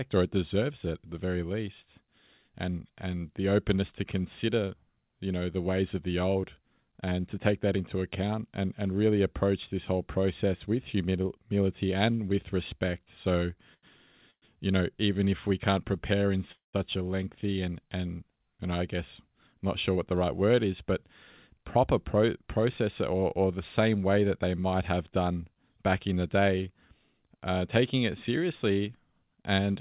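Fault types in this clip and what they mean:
Short stall from a late packet: at 13.74 s the sound is held about 86 ms while the receiver waits, then resumes with nothing lost, briefer than a freeze.
Call audio freeze: at 14.31 s and 16.52 s the sound continues as fading buzz then silence, 112 and 214 ms, likely from packets held up in transit.
Jitter buffer speed-up: from 19.28 to 20.95 s, 21.60 to 22.85 s and 25.20 to 25.63 s the speech runs 6 to 12 percent fast at unchanged pitch, trimming excess delay.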